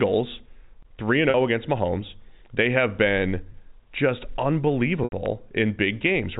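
Packets were lost three times, and each time the receiver bridged the hole by repeating the last pitch period. Between 1.30 and 1.34 s, right after "three and" and before "oh against", a 40 ms gap (consistent with two lost packets) comes out as a briefly held, buzzy sustain. At 3.52 to 3.54 s, after "have been", the 20 ms loss is shorter, just a slight stutter of repeated tone. From 5.04 to 5.12 s the 80 ms loss runs longer than the repetition can cover, so the held buzz fades toward silence before the speech returns with a short cross-fade. Throughout, the narrow telephone band of the G.711 A-law path is audible, with nothing above 4 kHz.

A loud pop follows at 5.26 to 5.28 s. Its likely cause is a sudden voltage step or pulse, from a plug, switch, static discharge or driver glitch, entering the signal chain. It is heard as a single sharp pop peaking a few dB above the speech, which carries on underneath it.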